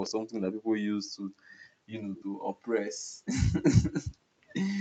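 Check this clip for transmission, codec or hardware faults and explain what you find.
Two faults show up, both from a far end playing the call through a loudspeaker.

Echo leak, 0.02–0.11 s and 2.16–2.24 s: faint scraps of the voice trail 190 ms behind, likely residue the far-end echo canceller failed to remove.

Background gated by the echo canceller, 1.04–1.51 s, 1.68–1.92 s, 2.92–3.26 s and 4.03–4.42 s: the canceller clamps the microphone during loudspeaker playback, so room sound dips by about 38–40 dB, then returns.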